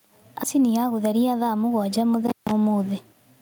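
Right through the speech there's gain pumping. The level swings by roughly 10 dB whenever the talking gets loud, so levels feel squashed together. The likely cause is gain set far too high with a fast limiter clamping each peak.

At 0.43 to 0.45 s there's a skip ahead. Roughly 0.4 s of speech just vanishes, dropped in transit or by an overflowing jitter buffer, and the two sides are butted together with no gap, so playback lurches forward mid-flow.

From 0.56 to 1.98 s the jitter buffer speed-up kicks in. The receiver trims lots of tiny pitch-period chunks, around 0.2 s in total, to shed excess delay. The speech runs at about 112% speed without any pitch shift, so it sounds a bit rushed.

Then at 2.27 to 2.51 s comes an intermittent contact, like a loose plug or cable opening briefly. The sound cuts out for about 150 ms with crackle at each edge, and faint hiss remains while the line is open.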